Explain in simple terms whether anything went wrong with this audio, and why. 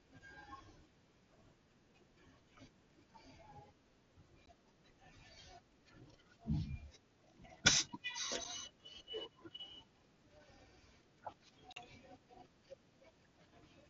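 Unconcealed Bluetooth headset packet loss leaves tiny silent holes with abrupt edges at 4.46 s, 8.44 s and 11.73–11.77 s. Unlike concealed loss, nothing fills the gaps.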